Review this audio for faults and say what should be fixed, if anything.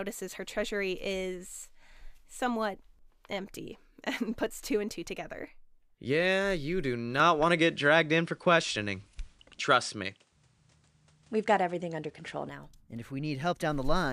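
Right after "you do", at 7.20 s, the speech abruptly loses everything above 10.5 kHz, its level shifts by roughly 5 dB, and a new noise floor about 45 dB below the speech comes in with no gap. The sound stays that way until 12.49 s, then returns. The likely cause is an input switched to a poorer device, one with a narrower band, its own level and its own noise. Lock the recording input to one device so the system cannot change it mid-session.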